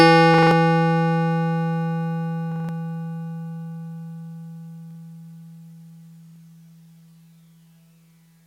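A music clip with four repeated-buffer stutters. A short slice of about 43 ms plays again with a hard join at each restart, which fits a 2048-sample buffer. It repeats four extra times at 0.34 to 0.51 s and again at 2.52 to 2.69 s. It repeats once at 4.91 to 4.95 s and twice at 6.27 to 6.36 s. New audio arrived late, so the device replayed its last buffer. About 150, 150, 40 and 100 ms of music are skipped.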